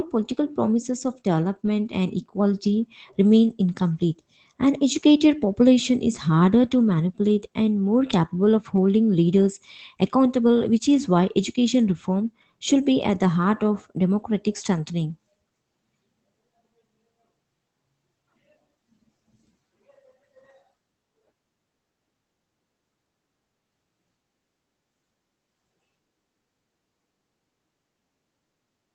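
No technical faults can be heard in this speech.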